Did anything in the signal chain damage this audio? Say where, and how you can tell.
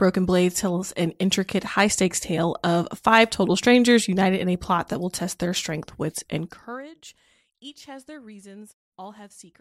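No, nothing in this speech stood out on listening as damage from any stage of the signal chain.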